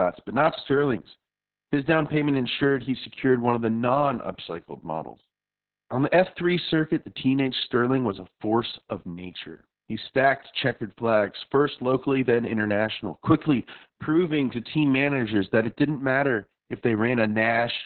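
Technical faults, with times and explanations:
Throughout, Opus voice compression: heavy narrowband SILK coding, likely around 6 kbps, strips everything above 4.3 kHz, so the speech sounds muffled, hoarse and a bit robotic.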